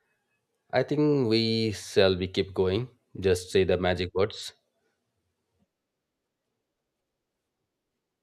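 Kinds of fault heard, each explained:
Nothing to report: no audible faults anywhere in the speech recording.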